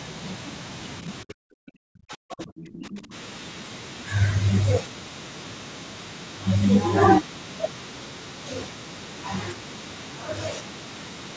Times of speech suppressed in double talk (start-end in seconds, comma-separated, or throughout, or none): 1.23-3.13